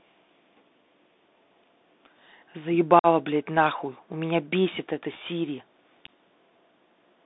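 Throughout the clip, the speech carries the Bluetooth CVSD headset codec. The line passes roughly 200 Hz to 3.7 kHz, nothing higher. The codec sends one bit per sample and adapts its step size. It cannot track fast changes, so s sounds turn scratchy and a granular hiss lies underneath. The damage is plainly audible and fits a 64 kbps CVSD link.

From 2.99 to 3.06 s there is unconcealed Bluetooth headset packet loss. About 49 ms of audio is missing, which points to around fifteen lost packets. Nothing covered the loss. The speech stops abruptly, leaving a hole with hard edges.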